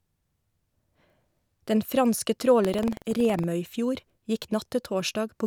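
From 2.60 to 3.48 s the speech takes on a robotic rattle at about 21.5 Hz: buffer tearing. The writing and reading sides of the audio ring buffer have drifted until they cross inside each period, so a small slice of every buffer, roughly a fiftieth, repeats speech from about a tenth of a second earlier, with hard joins at each edge. The buzz rate fits a 2048-sample buffer. Dropouts leave silent gaps, but this fault never goes quiet.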